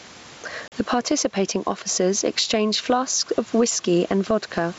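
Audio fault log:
Throughout: gain pumping. The level keeps lurching by roughly 15 dB. The room noise sits well below the speech. Loud and quiet passages end up pressed close together, so the speech sounds squashed. The likely cause is input gain set far too high, with a fast limiter or compressor clamping down on every peak and then letting go.
0.68 to 0.73 s: packet loss on an ADPCM call. A sharp-edged hole of about 40 ms cuts into the speech, which points to roughly two lost packets. The gap is filled with plain silence. The decoder's adaptive predictor and step size then fall out of step with the sender's. So the speech comes back with some distortion, and it needs some tens of milliseconds to settle.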